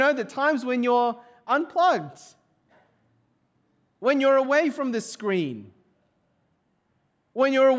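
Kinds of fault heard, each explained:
No faults are audible anywhere in this recording.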